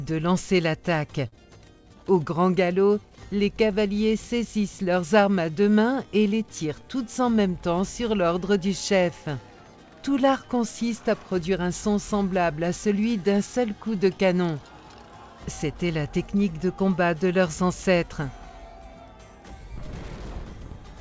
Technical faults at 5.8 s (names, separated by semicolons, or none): none